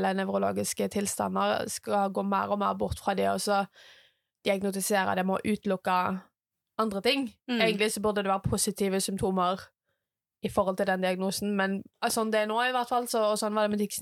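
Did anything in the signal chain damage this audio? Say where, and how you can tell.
Yes. A single loud pop at 12.10 to 12.12 s stands about 5 dB above the speech, which continues underneath. The likely cause is a voltage pulse from a plug, switch, static or driver glitch, entering before later circuits shaped it, unlike a dropout, which would interrupt the sound.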